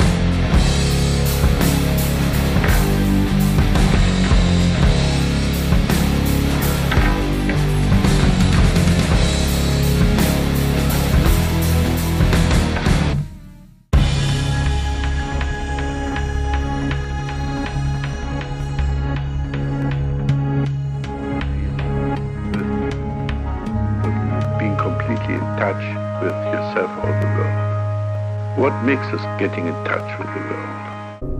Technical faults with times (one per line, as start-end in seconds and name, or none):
0.41-30.93 clock drift buffer slips